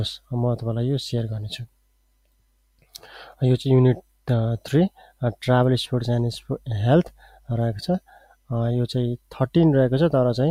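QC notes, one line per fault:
Throughout: noise suppressor applied to music or sounds. A speech-tuned suppressor treats steady tones and decays as noise, so level swings by around 20 dB and the sound pumps and thins.
1.65–3.41 s, 4.01–4.28 s, 4.89–5.21 s, 6.4–6.67 s, 7.05–7.49 s, 8.0–8.5 s, 9.17–9.36 s: sound cut by the noise suppressor. Sustained or fading sound is pulled down, by about 11 to 21 dB (deepest at 1.65 s, 4.01 s and 8.0 s), so tails sink abruptly.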